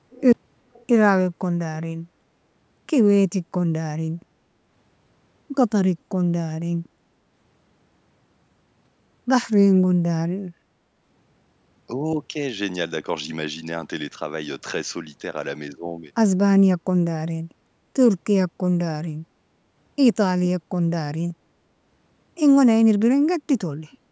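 Brief, faint repeats of the speech appear at 0.11 to 0.22 s, 0.73 to 0.83 s and 23.92 to 23.98 s: an echo leak, likely from a far-end loudspeaker whose echo canceller let its microphone pick-up slip back. Each scrap trails the original by 381 ms and sits far below the speech. Unlike room reverberation, which smears into a continuous tail, this is a discrete copy arriving after a fixed gap.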